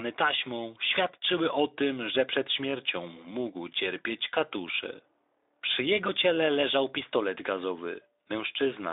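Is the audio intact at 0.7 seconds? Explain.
Yes, the audio is intact at 0.7 seconds, with no fault to be heard at that moment.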